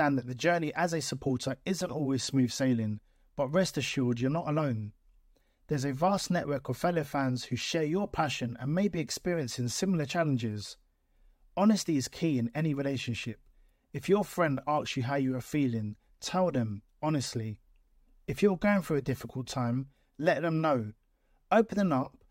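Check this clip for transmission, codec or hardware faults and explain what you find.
No faults turn up anywhere in this speech recording. There is nothing further to report.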